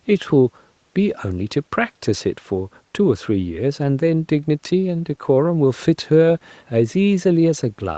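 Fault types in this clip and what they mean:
No faults can be heard in this speech clip. It sounds like a call line, with nothing above about 8 kHz, which fits a wideband codec and the call's microphone processing.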